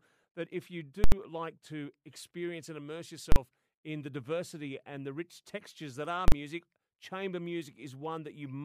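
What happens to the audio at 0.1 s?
At 0.1 s the speech plays through cleanly, with no dropout, click, distortion or other fault at that moment.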